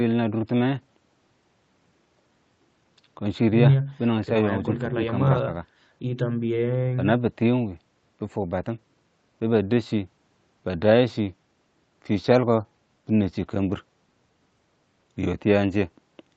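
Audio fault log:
No faults heard in this speech recording.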